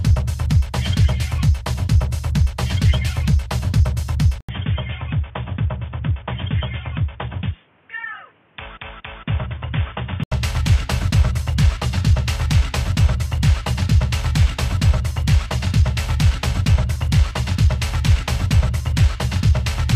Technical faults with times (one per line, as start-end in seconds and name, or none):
4.41-10.32 input switched to a poorer device